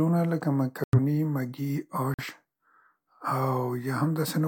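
Corrupt frame muted at 0.84 to 0.99 s and 2.14 to 2.25 s: the decoder rejected damaged compressed frames, leaving abrupt silent holes, each consistent with two lost frames, with timing kept.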